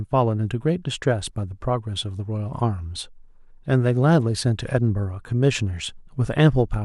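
A short speech recording with no audible technical fault. Nothing in it calls for a time or a cause to be given.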